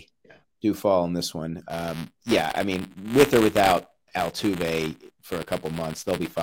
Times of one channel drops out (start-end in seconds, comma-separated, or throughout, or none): none